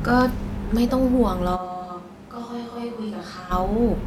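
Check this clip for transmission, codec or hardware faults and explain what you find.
One hardware-related fault stands out in this speech clip. From 1.57 to 3.50 s the sound switches abruptly to a distant microphone: it turns roomy and hollow, loses bass, drops roughly 10 dB, and background noise rises to about 25 dB below speech. The close microphone's feed likely dropped out, leaving a farther pickup. Unlike added reverb or a gain dip, tone, level and noise all change together at both hard edges.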